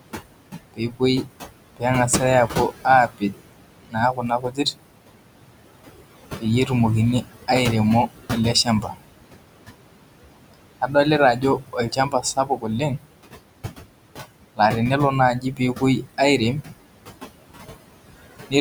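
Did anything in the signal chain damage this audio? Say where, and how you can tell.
Yes, and the damage comes from call processing, specifically the noise suppressor. Throughout the clip the room noise, which sits only about 10 dB below the speech, pumps: it sinks by about 21 dB in the gaps and swells back under the speech. These noise suppressor artifacts come from per-band, frame-by-frame gain changes. The suppressor is fighting noise that is close to the speech level.

The same stage also cuts speech. Soft sounds turn faint or swallowed between 0.74 and 4.76 s, where roughly one and a half seconds in total are pulled down, by up to about 21 dB. Shorter stretches are turned down at 6.37–7.49 s (about 15 dB), 8.07–8.98 s (about 19 dB), 10.54–13.1 s (about 22 dB) and 15.4–16.77 s (about 21 dB). The suppressor misread quiet speech energy as noise and attenuated it along with the background.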